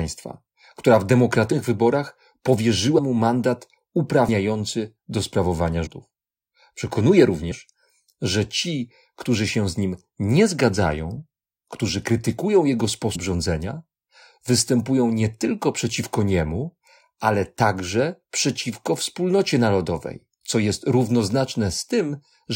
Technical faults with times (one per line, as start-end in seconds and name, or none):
1.51 compressed frames skipped
2.97-2.99 compressed frames skipped
4.27 compressed frames skipped
5.85 compressed frames skipped
7.50 compressed frames skipped
13.14 compressed frames skipped